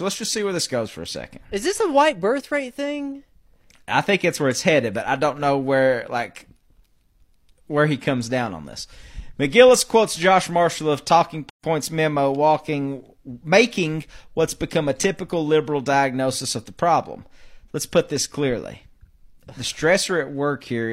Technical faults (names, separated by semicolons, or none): gap at a join of encoded pieces